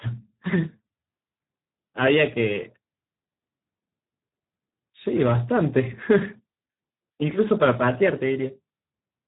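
Speex codec damage runs through the whole clip. This CELP speech codec models each short stretch of speech as a filter driven by an excitation signal, and here that excitation is starved of bits, which points to a setting around 8 kbps. The speech comes out heavily degraded: hoarse, noisy and edging towards a robotic, vocoder-like buzz. The band is also cut off at 3.8 kHz, leaving the speech thin and muffled with no upper detail.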